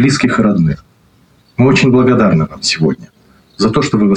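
Nothing goes wrong anywhere in this clip; the sound simply runs along without a single technical fault to point out.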